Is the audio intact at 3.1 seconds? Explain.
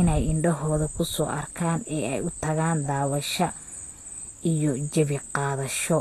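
No. Throughout, including 3.1 s, the speech sounds hissy and grainy with nothing above 14.2 kHz, likely Vorbis compression coarsely quantising treble detail into noise.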